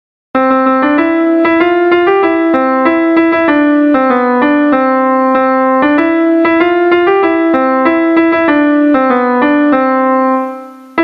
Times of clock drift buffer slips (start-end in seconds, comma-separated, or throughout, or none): none